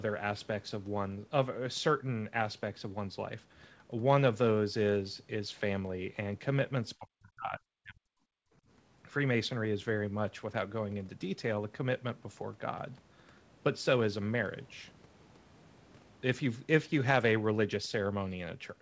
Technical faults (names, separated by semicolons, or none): speech suppressed in double talk; background gated by the echo canceller